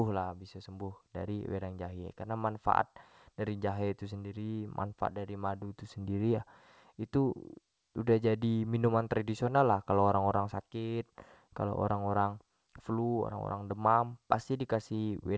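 Nothing in this speech clip stands out as a fault; it just comes across the way a call normally does, with nothing above 8 kHz, which fits a wideband call codec such as G.722.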